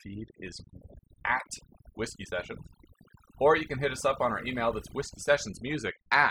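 Throughout, overdone noise removal strips bands near the noise estimate, leaving twinkling specks in a lowered background, unlike a noise gate's whole-signal on-off cuts.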